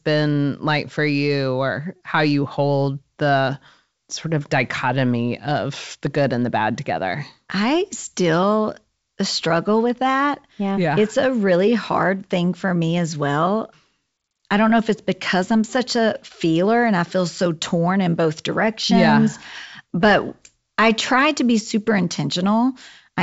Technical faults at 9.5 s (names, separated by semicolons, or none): none